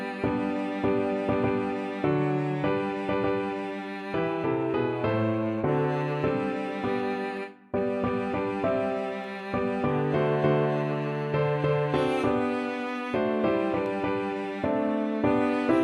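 The stream has most likely lost a few samples at three points, so the waveform jumps straight from one value to a later one, a gap of only a fraction of a millisecond. These dropped samples remove no audible sound but leave a single sharp click each time, at 7.37, 9.24 and 13.86 seconds.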